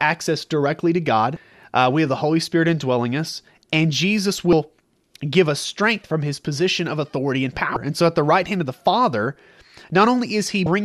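Brief blips at 1.34–1.37 s after "directly to", 4.50–4.53 s, 7.74–7.77 s after "position of authority and", and 10.63–10.67 s mark damaged data in a compressed stream: corrupted bytes make the decoder misread frames and lose sync.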